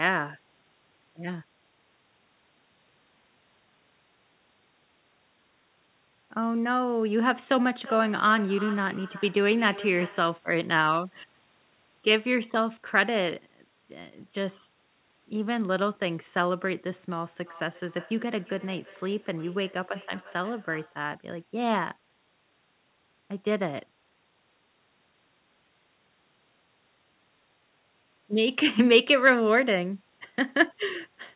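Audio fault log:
7.80–10.46 s and 17.42–21.06 s: feedback echo between two devices. Each phrase returns roughly every 0.4 s, thinner and ringing, peaking about 15 dB then about 23 dB below the speech. A spectrogram shows fading, evenly spaced copies of each syllable.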